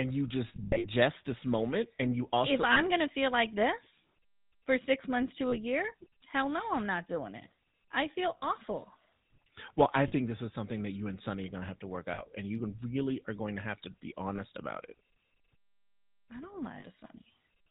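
The whole clip carries GSM full-rate codec damage. Speech sounds buzzy and gravelly. Nothing passes above 4 kHz. The codec models the vocal tract and drives it with sparse, regular pulses, which fits a 13 kbps rate.

Lost GSM frames first appear from 0.48 to 0.87 s, about 260 ms missing in scattered gaps. The longest gap is about a tenth of a second. Brief losses, mostly 40 ms, follow at 2.72, 5.48, 8.38, 10.08, 12.14, 14.36 and 16.8 s. The last good frame repeats, giving a rough, metallic ring.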